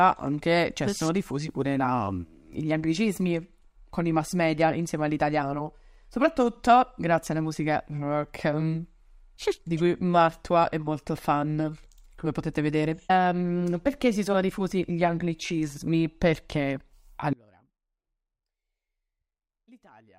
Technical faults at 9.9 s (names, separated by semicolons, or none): none